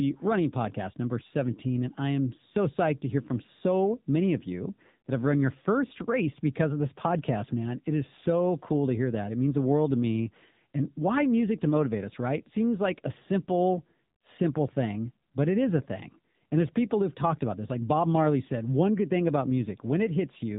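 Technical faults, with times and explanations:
Throughout: AMR narrowband mobile codec. Nothing passes above 3.8 kHz. Few bits drive a vocal-tract model, so the speech sounds buzzy and synthetic, which fits a low rate near 8 kbps.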